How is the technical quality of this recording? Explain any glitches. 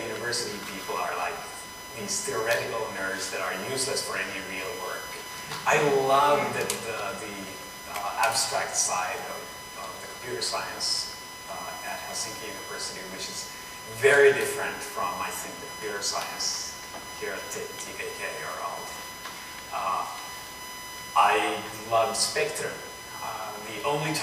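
The technical quality is compromised by a constant USB whine running through the whole recording. It is a fixed-pitch tone at 1 kHz, sitting only around 10 dB below the wanted audio, so it is prominent. The USB bus draws current in regular 1 ms frames, and that 1 kHz pulsing leaks into the audio path through shared power or ground. On a spectrogram it appears as an unbroken horizontal line at 1 kHz from start to finish.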